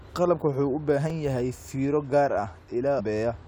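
Speech with two faults. At 1.10 s, just after "wuxuu u" and before "yahay fiiro gaar ah", a repeated buffer plays one 5.33 ms block twice, a hard-joined repeat consistent with a 256-sample buffer arriving late. From 2.98 to 3.01 s, after "yahay fiiro gaar ah", damaged data in the compressed stream makes the decoder lose frame sync, producing a short glitch.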